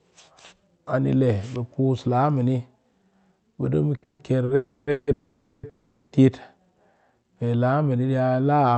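At 3.96 s the speech hangs briefly in a short stall from a late packet. The jitter buffer ran dry and the receiver stretched the last sound for about 60 ms, giving a held, faintly buzzy syllable, then resumed exactly where it had stopped. A second stall at 4.45 to 4.49 s adds about 30 ms the same way. What separates these stalls from the freezes is their length: a held sound too short to fade away, with nothing lost.

From 4.03 to 4.20 s a call audio freeze follows directly. The held sound decays as a fading buzz, and its last 60 ms or so drop into silence before speech picks up again. Further freezes follow at 4.55 to 4.88 s, 4.91 to 5.08 s, 5.12 to 5.64 s and 5.69 to 6.13 s, each inserting roughly 160 to 510 ms of smeared, fading continuation without skipping any speech. The likely cause is packets held up in transit. The growing run of gaps shifts the speech progressively later, and the Opus call path cuts off everything above 8 kHz throughout.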